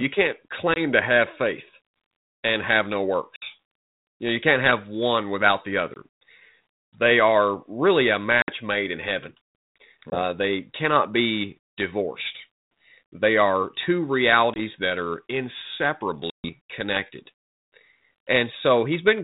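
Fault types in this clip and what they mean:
Packet loss on an ADPCM call: lost packets become silence and the decoder's predictor loses step, leaving seven hard-edged gaps of 20 to 140 ms, then slightly distorted speech that settles within tens of milliseconds.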